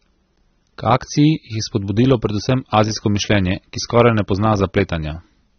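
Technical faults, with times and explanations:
Throughout, AAC compression: the speech sounds dull and smeared, with a warbly, fizzy edge on sibilants and nothing at all above about 6.3 kHz. That's likely a heavily squeezed AAC-LC encode, consistent with roughly 24 kbps, where the encoder drops the top end and coarsely quantises what's left.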